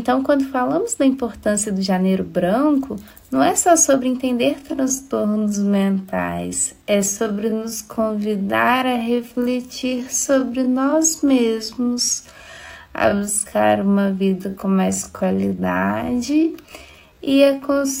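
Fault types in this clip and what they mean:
Time-stretched section: from 4.56 s the pace drops to about 0.61 times speed with pitch unchanged, so it drags, likely software stretching rather than slowed playback, which would lower the pitch.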